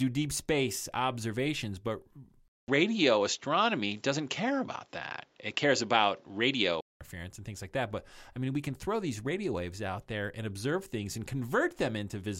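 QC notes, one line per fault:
2.48–7.01 s, input switched to a poorer device. After "deep space observations but", a 200 ms gap, then dull sound capped at 7.6 kHz, faint new background noise, about 5 dB level shift. Likely another microphone.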